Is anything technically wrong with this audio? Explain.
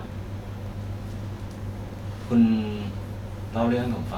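Yes. A repeated buffer occurs at 0.66 s and 1.99 s in this speech. A 1.33 ms slice, fitting a 64-sample buffer, replays once when fresh audio arrived late, producing a click or brief buzz. The waveform shows a hard step, and the spectrogram shows a thin vertical broadband line.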